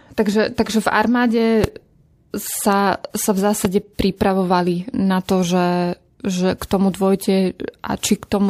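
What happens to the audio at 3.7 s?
A loud pop hits from 3.65 to 3.67 s, likely a brief voltage pulse from a plug, switch or static discharge entering the signal chain. It sounds as a single sharp pop standing around 15 dB above the speech, which continues underneath.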